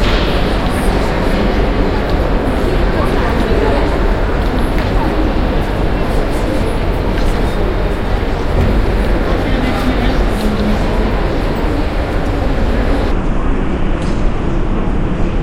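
From 13.12 s to the end at 15.42 s, a section at the wrong speed plays back at 0.67 times normal, so the sound drops about seven semitones and stretches out, deeper and slower. The likely cause is a section played against the wrong clock.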